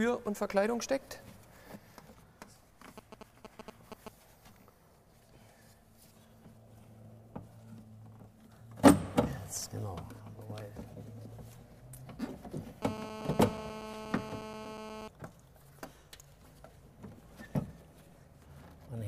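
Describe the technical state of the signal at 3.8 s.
GSM signalling bursts run from 2.98 to 4.08 s: a nearby 2G phone's radio bursts, rectified by the audio circuit, produce galloping ticks and 217 Hz buzzing, only slightly below the signal level.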